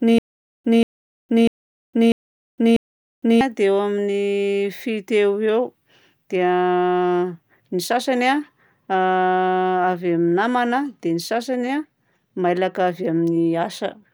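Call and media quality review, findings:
Stutter with silent gaps, 0–3.41 s, under way at start. Same 184 ms fragment five times, 645 ms period, 461 ms digital silence between. Waveform: identical bursts, flat silent gaps. Spectrogram: repeated blocks, blank columns. Likely player/stream stall replaying last buffer. Intervening audio lost.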